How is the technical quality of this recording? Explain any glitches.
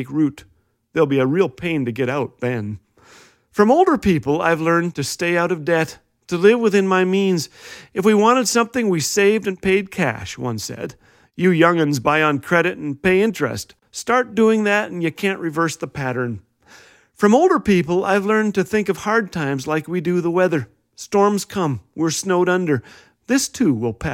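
Nothing to report on the technical side: no audible faults or glitches anywhere in the recording.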